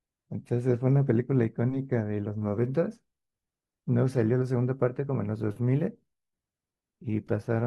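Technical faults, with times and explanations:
No faults are audible anywhere in this speech recording.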